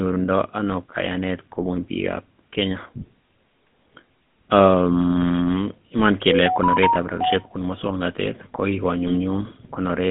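Throughout, the speech carries the GSM full-rate codec sound: a buzzy, gravelly roughness on every voiced stretch, with the band held between about 150 Hz and 3.5 kHz. This comes from the vocal-tract model being driven by a coarse, regularly spaced pulse excitation that keeps only a fraction of the detail, consistent with a 13 kbps full-rate link. The grain sits inside the voice itself, which sets it apart from a plain telephone band-limit, where the sound would be muffled but smooth.

From 9.07 to 9.16 s come GSM bit errors. For just under a tenth of a second the voice breaks into a squawking, gargling burst. Corrupted bits reached the decoder and scrambled the filter, pitch or gain values, so for a few frames the sound is bent out of shape. A dropout or a packet-loss concealment gap would go quiet or smear, but this stays present and distorted.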